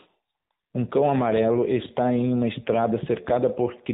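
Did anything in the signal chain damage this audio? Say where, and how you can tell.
Yes, at the codec stage: the whole clip carries AMR narrowband mobile codec damage. Nothing above 4 kHz survives, and the speech has a buzzy, synthetic edge throughout. Few pulses drive the vocal-tract model in each frame, which fits a low-rate mode around 7.4 kbps.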